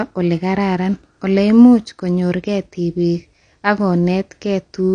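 From start to finish the speech carries plainly audible damage that is likely AAC compression at a low bitrate, which fits roughly 32 kbps AAC-LC. The encoder discards everything above about 9.8 kHz to save bits, so the sound is dull and lacks air throughout. On a spectrogram this shows as a flat, hard ceiling near 9.8 kHz with empty space above it across the whole clip. The waveform itself looks ordinary.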